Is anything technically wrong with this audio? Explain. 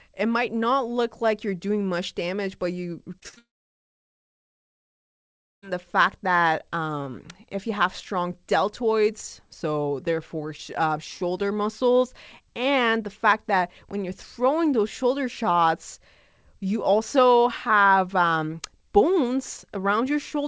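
Yes. The speech has two network faults, one running straight into the other, heard over a G.722 call path that leaves nothing above 8 kHz.

From 3.20 to 3.38 s, just after "much damage but you", there is repeated packet loss (robotic sound). Four short gaps, the longest 41 ms, are each patched by extending the previous sound, covering about 46% of that stretch. The result is choppy and robotic, with fragments missing.

From 3.38 to 5.64 s the audio drops out for about 2.2 s, almost all of it silent after a brief fading fill. This is likely a long network dropout, where no packets arrived and the lost stretch was never recovered. Speech resumes at "the fact that um", with the missing part skipped.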